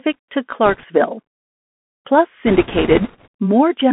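Throughout the speech, the Bluetooth CVSD headset codec narrows the sound to a telephone band of roughly 200 Hz to 3.4 kHz. The codec sends a single up-or-down bit per sample, which fits the 64 kbps CVSD stream, and its adaptive step cannot keep pace with fast, loud high-frequency movement. Sibilants therefore sound scratchy and a grainy hiss sits under everything. On a spectrogram, energy stops abruptly near 3.4 kHz with nothing above, and a fine noise floor fills the band. The waveform shows small stair-stepped, slope-limited edges.

From 0.65 to 0.85 s there are bit errors on a Bluetooth voice link at a light rate of around 1 to 2 percent. Because each flipped bit only nudges the signal one step and the error then fades away, the result is a rushing crackle rather than sharp clicks. A spectrogram shows a broadband speckle across the band for that stretch, and the waveform roughens without tall spikes.

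The same fault returns, heavier, from 2.46 to 3.28 s at roughly 4 percent. The crackling rush is much louder and denser. The spectrogram speckle is thicker. The waveform carries a visibly thicker noisy envelope but still shows no isolated impulses.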